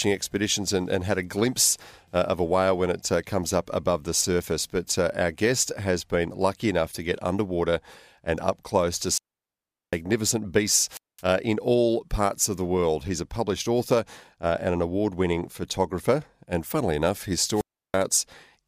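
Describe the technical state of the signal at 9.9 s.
Near-silence after a brief hiss: at 9.9 s the speech sits inside a wireless microphone squelch dropout running from 9.04 to 10.02 s, after "underwater and up close" and before "beasts uh in all". The FM radio link faded and the receiver's squelch muted the output for about 0.75 s.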